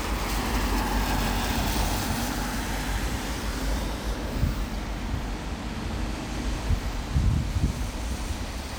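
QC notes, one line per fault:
No faults heard on this audio; nothing to log.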